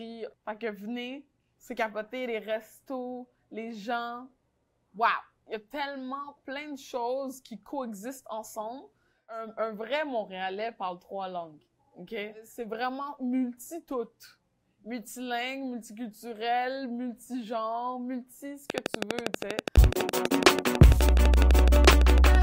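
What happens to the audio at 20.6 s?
Likely interference injecting pulses produces a train of clicks from 18.7 to 22.36 s, a regular ticking about 12 times per second, standing well above the sound.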